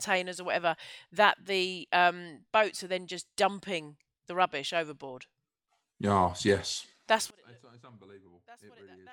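From 7.30 s to the end at 9.13 s, the speech drops by about 31 dB and turns faint. That's likely one channel inverted: with one side's polarity flipped, the centred voice cancels when the channels sum to mono, leaving only their small difference.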